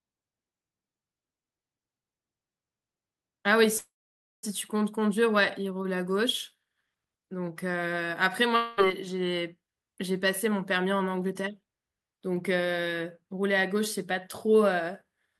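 Speech, with three network-related faults. From 3.77 to 4.45 s a call audio freeze holds the sound as a short fading fill, then about 0.54 s of silence. The speech resumes where it stopped, so nothing is lost but the clip runs 656 ms late. This is likely from delayed packets emptying the jitter buffer. At 8.56–8.80 s a long network dropout covers 217 ms with a fading fill that never reaches silence. When the sound returns, 220 ms of speech is gone, likely from lost packets. From 10.19 to 11.37 s a jitter buffer speed-up plays the speech at 108% with unchanged pitch, sounding hurried. About a tenth of a second of pitch periods is trimmed to reduce buffered delay.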